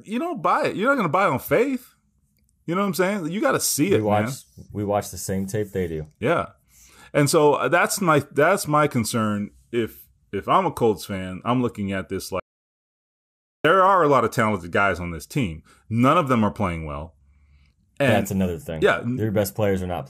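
At 12.40 s the audio input was likely lost, whether from a disconnected device, a dropped link or an accidental mute, while recording carried on writing silence. The result is an audio dropout to silence: the speech cuts off abruptly mid-flow and the signal falls to silence with no room tone underneath. It returns just as suddenly at 13.64 s, so about 1.25 s of speech is simply missing.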